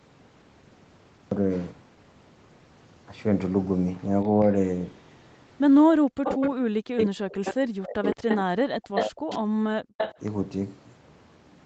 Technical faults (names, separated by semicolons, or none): echo leak; speech suppressed in double talk